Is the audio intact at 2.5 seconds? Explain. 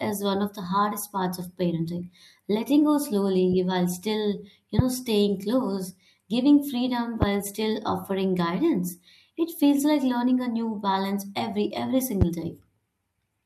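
Yes, the speech at 2.5 seconds is intact: nothing there breaks, drops out or is distorted.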